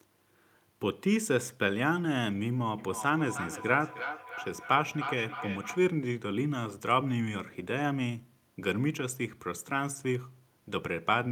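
From 2.78 to 5.91 s the speech carries a feedback echo between two devices: each stretch of speech comes back roughly a third of a second later, the loudest repeat about 8 dB below the direct speech. A second device in the room is replaying the call, and this microphone picks that playback up again, which its own echo canceller cannot remove. On a spectrogram, each syllable's harmonic pattern reappears as a fainter copy shifted right by that fixed gap.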